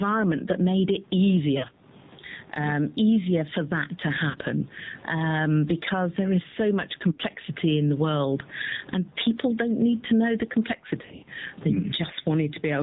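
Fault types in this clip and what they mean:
Gain pumping, throughout: the gain swings by roughly 15 dB, pulling down on each loud syllable and squashing loud and soft parts closer in level, likely from excessive gain feeding a fast limiter.
AMR narrowband mobile codec, throughout: nothing passes above 4 kHz, and the speech is plainly buzzy and synthetic, which fits a low 7.4 kbps mode.
Lost AMR speech frames, at 1.58, 4.30, 7.12 and 11.0–11.3 s: the decoder repeats stale settings at falling gain, giving dips and warbles, scattered after "need to know the".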